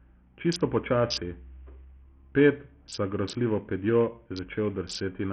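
Throughout the speech, the treble flickers in and out while a gritty, grainy noise and aliasing cling to the sound. This is heavy damage that likely comes from Bluetooth SBC compression, where a starved bit pool, consistent with roughly 48 kbps, leaves the upper sub-bands empty and the rest coarsely quantised.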